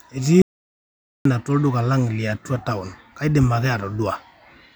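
Speech that suffers an audio dropout to silence from 0.42 to 1.25 s, losing about 0.84 s. The sound stops abruptly, with no room tone, then resumes mid-flow, likely from a lost input or mute. The waveform shows a dead-flat line and the spectrogram a fully blank column.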